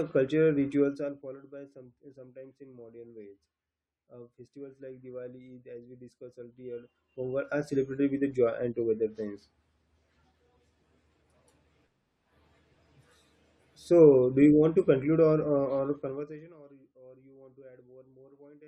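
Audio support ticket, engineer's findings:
Zipper noise, three instances: 0.76–1.44 s (level down roughly 20 dB), 6.56–7.76 s (back up roughly 20 dB), 15.92–16.6 s (down roughly 25 dB). Audible ticking under the speech while gain moves. Probable gain stage stepping in 1 dB increments, around 30 steps per second, no interpolation between steps; each jump leaves a small discontinuity.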